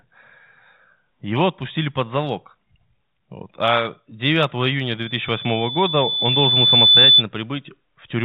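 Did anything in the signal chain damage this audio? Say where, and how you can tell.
Yes. A piercing tone at 3.5 kHz swells from 5.03 s to 7.23 s, building over about two seconds to roughly 10 dB above the speech. This is loudspeaker feedback squeal in the acoustic path: the microphone hears its own loudspeaker, and the loop gain at that frequency exceeds one.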